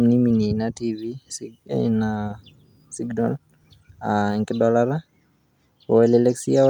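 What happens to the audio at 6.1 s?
Nothing goes wrong at 6.1 s; the speech continues intact through that moment, with no dropout, click or distortion.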